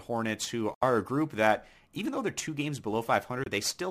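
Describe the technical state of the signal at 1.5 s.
The signal is intact at 1.5 s, with no dropout, distortion, glitch or other fault at that point.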